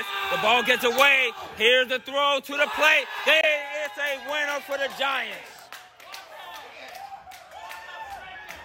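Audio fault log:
3.41–3.44 s, Bluetooth dropout: the sound cuts to silence with abrupt or briefly faded edges, then resumes further along as though it had kept playing. The likely cause is packets missing their deadline to the headphones, a gap of about 21 ms that fits a single lost frame.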